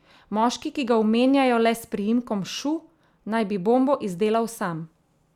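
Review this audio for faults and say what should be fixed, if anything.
No faults were found, so nothing needs fixing.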